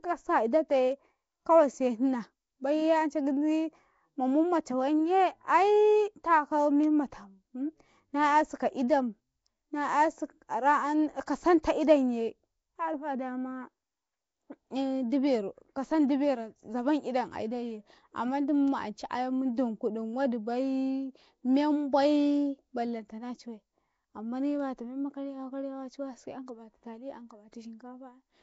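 All the way through, the speech has a rough, hissy halo and a smeared, underwater feel, with nothing above about 7.7 kHz. That's very likely Nellymoser compression, the old Flash microphone codec, working at a rate that fits roughly 32 kbps. It codes short blocks with a fixed, small bit budget per sample, so bands it can't afford drop out and get filled with noise. That's where the hiss and the watery smearing come from, and the damage is plainly audible.

At 11.63 s there's a pre-echo: a sharp attack arrives with a brief hiss smeared about 12 ms ahead of it, and the onset itself sounds softened. The attack falls late in a transform block, and the coarse quantisation noise the codec sized for that loud moment gets spread across the whole block, including the quiet stretch just before the attack.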